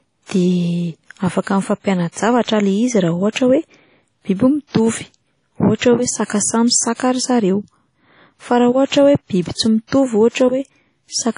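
Across the whole speech clip there is a washy, ringing hiss that breathes with the signal and nothing above 10.1 kHz. Unlike a plain low-pass, the grain swells and fades with level, likely WMA compression at a low bitrate around 32 kbps.

Pre-echo appears at 3.32–3.36 s, at 6.27–6.30 s just after "ohatra hoe", and at 6.94–7.00, 9.87–9.92 and 10.29–10.35 s. Block-spread quantisation noise leaks 31 to 59 ms ahead of sharp onsets, so the hiss precedes the attack, unlike reverb, which trails it.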